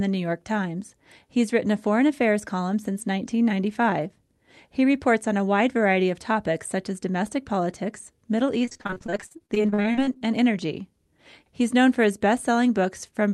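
From 8.65 to 10.23 s, repeated packet loss chops the speech. Many short holes, the longest 45 ms, are patched with repeated sound, giving a robotic stutter.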